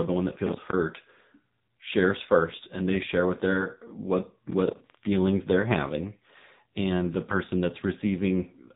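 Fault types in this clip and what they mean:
AMR narrowband mobile codec: the AMR-NB phone coder, at a rate fitting 6.7 kbps, removes everything above 3.8 kHz and leaves heavy buzzy, synthetic damage.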